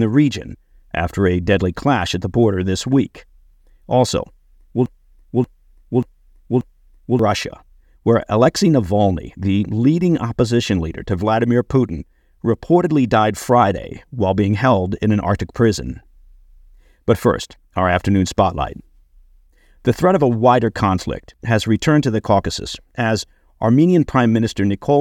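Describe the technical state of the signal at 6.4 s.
At 6.4 s the signal is inside a broken-record loop running from 4.86 to 7.19 s: a 0.58 s fragment of speech repeats four times back to back, most likely because playback stalled and kept resending its last buffered piece, so the intervening audio is lost.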